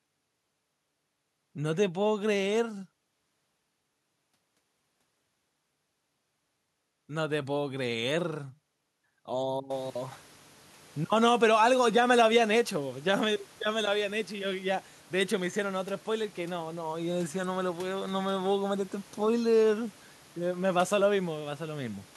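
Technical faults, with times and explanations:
There are no technical faults in this clip, so there are no times or explanations to give.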